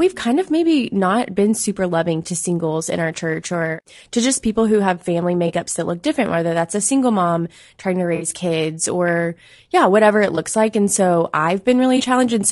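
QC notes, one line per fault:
Throughout: low-delay AAC compression. The speech sounds rough and grainy, with noise filling between the harmonics and a thin, synthetic top end. That's likely AAC-ELD's short frames resolving pitch poorly, and the damage fits something around 32 kbps.
5.47–5.51 s, 8.15–8.25 s, 10.35–10.38 s, 11.97–12.01 s: AAC frame loss with concealment. Short smeared, noisy patches where the decoder patched missing audio from the last good spectrum. The 8.15 s one covers about 60 ms, so it smears longer; the others cover about 20 ms.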